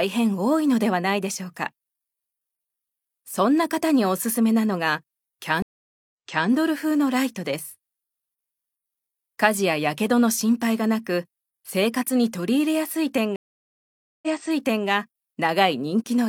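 At 5.62 s and 13.36 s the connection dropped and the player restarted its decoder mid-stream, a stream reconnect. Each time the sound falls silent for 0.49 s, then 0.87 s, and resumes 0.37 s, then 0.65 s, earlier, repeating what was just heard.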